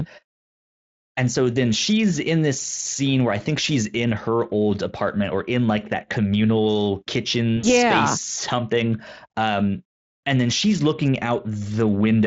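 VoIP packet loss concealed by the speech codec occurs from 7.57 to 7.68 s. About 60 ms of speech went missing, and the Speex decoder filled the gap by extending its last pitch and filter with falling gain, giving a short buzzy, fading smear that lingers before recovering.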